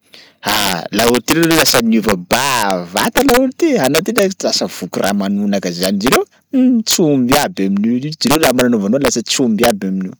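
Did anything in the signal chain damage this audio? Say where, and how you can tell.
Yes, integer overflow in the sample-format or gain stage: pushed about 3 dB too hot, a small fraction of loud peaks wrap to the opposite sign, giving sharp cracks throughout the speech.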